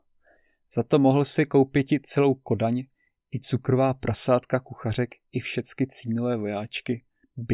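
Speech recording with no technical faults detected anywhere in the clip.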